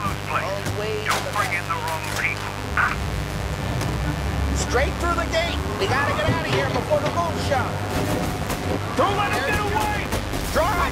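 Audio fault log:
Throughout: mains buzz. A steady, raspy buzz sits under the sound, only around 10 dB below it. Sharp switching spikes from the 50 Hz supply leak in twice per cycle. Their harmonics stack up at 100 Hz spacing into the kilohertz range, giving the edge.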